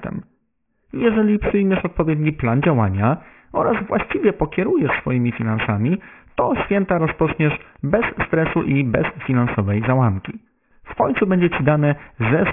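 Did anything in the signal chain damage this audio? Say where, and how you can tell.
Yes, at a sample-rate conversion stage. Throughout the speech, the audio stops abruptly at 3 kHz, yet the band just below that edge stays densely filled. Sibilants come out gritty and metallic instead of simply dull, which fits a drop to a 6 kHz rate with no anti-aliasing filter. This is aliasing: energy above 3 kHz folded back down as unrelated tones, roughly 10 dB under the speech. Plain band-limiting would sound muffled but clean, without this mirrored hash.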